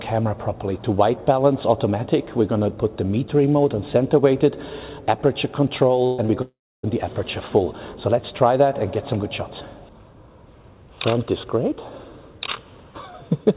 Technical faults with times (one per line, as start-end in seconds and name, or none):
6.06-6.20 burst of packet loss
6.26-6.30 short concealed packet loss
6.42-6.85 long network dropout